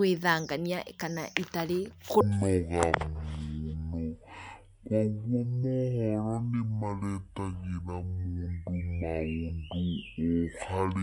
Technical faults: section at the wrong speed

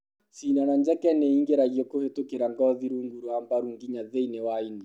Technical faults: none

